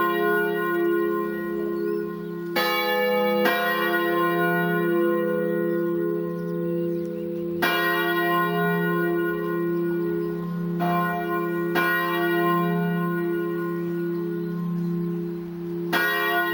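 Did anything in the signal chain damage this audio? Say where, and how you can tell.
Yes. Imaging from sample-and-hold upsampling runs throughout, at the rate-conversion stage. A metallic fizz between 8 and 16 kHz tracks the sound, about 20 dB down. That fits unfiltered sample repetition from 16 kHz to 48 kHz.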